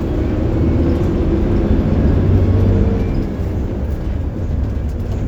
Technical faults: none

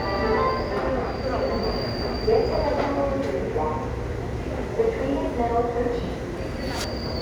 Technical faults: imaging from linear upsampling

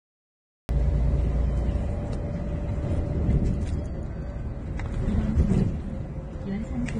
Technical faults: Vorbis compression; cut-off start

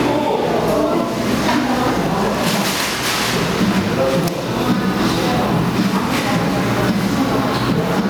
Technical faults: gain pumping

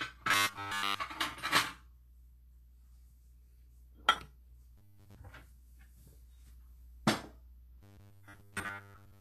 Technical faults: Vorbis compression; robotic sound from repeated short buffers

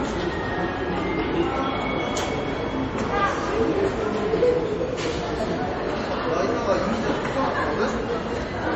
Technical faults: MP3 compression

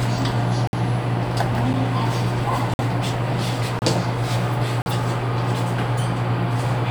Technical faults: gap between stream segments

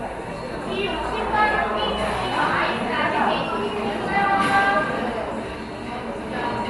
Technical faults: Dolby Digital compression

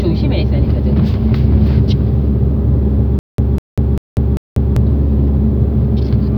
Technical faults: stutter with silent gaps

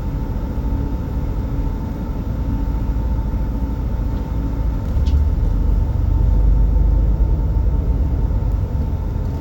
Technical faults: none

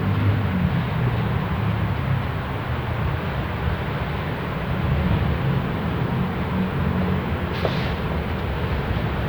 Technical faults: none

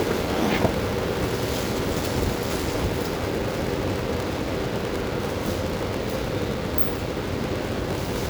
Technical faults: block size mismatch (padded)

